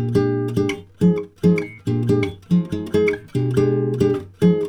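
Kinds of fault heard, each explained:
No audible fault found anywhere in the clip.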